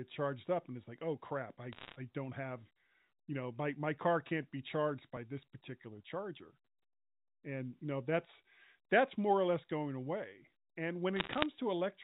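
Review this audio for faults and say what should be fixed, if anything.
Bit errors on a digital phone line appear twice, from 1.73 to 1.96 s, after "like oh crap i", and from 11.16 to 11.46 s, after "less going away and". They sound like crackle over the speech. Scattered flipped bits, roughly one in a hundred or fewer, each corrupt a single logarithmic sample, and hits on sign or high bits produce the sharp ticks. The G.711 A-law coding itself is heard as a band limit at 4 kHz. Prevent it by fixing the noisy digital link or adding error detection to the transmission path.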